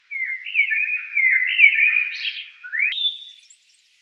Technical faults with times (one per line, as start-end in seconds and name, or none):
2.92-4.02 wrong sample rate